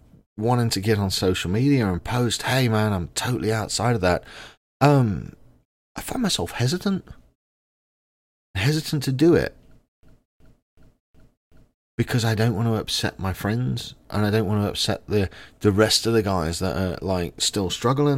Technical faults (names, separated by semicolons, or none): system hang loop